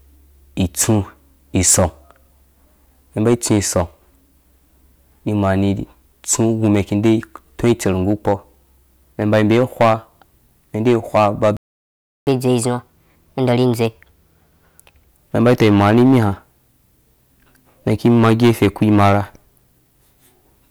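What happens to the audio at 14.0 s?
At 14.0 s the player is in a catch-up at higher speed, running from 12.27 to 15.08 s. After a stall it resamples its backlog to play 1.25 times faster, so the speech is hurried and lifted by about four semitones until normal speed returns. Hard clipping is also present here, as throughout: the signal is driven about 10 dB past what a stage can pass, so a small fraction of peaks are squared off, adding crackle on the louder syllables.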